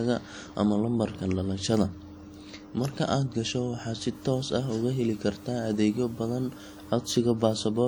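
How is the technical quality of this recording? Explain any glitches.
The recording has two audible faults: codec damage that runs through the whole clip, and a stretch of added hiss in its second half.

WMA compression, throughout. The speech has a ringing, washy quality, with a hiss that swells and fades along with the voice. That is the mark of a transform codec spreading its rounding error across long blocks and dropping weaker detail. The likely cause is WMA encoding, and the level of damage fits a bitrate around 48 kbps. The top end still reaches about 20.1 kHz, so the harm is smearing rather than a dulled treble.

Low bit depth with dither, from 4.15 to 6.92 s. A steady, even hiss appears, sitting roughly 30 dB below the speech and undistorted. It comes from the signal being stored with too few levels, which fits about 9 bits. Noise was added before rounding, so the error becomes a smooth, constant noise floor rather than gritty distortion. 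The hiss stops when the clean bit depth returns at 6.92 s.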